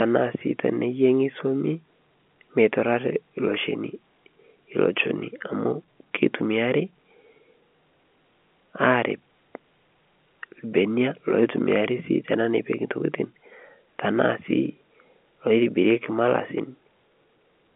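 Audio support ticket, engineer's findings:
No faults found in this speech clip. The G.711 telephone coding is audible as a narrow line band of roughly 250 Hz to 3.4 kHz, with nothing above about 3.7 kHz.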